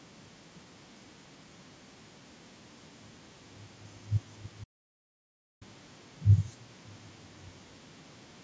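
Input was likely lost while recording continued: an audio dropout to silence from 4.64 to 5.61 s, cutting speech to dead, toneless silence.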